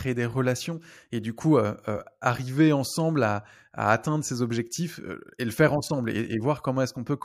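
No technical faults can be heard anywhere in the recording.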